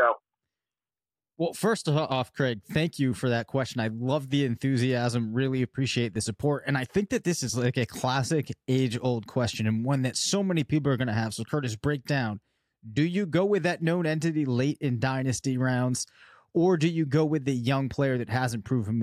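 Speech recording with no technical faults heard.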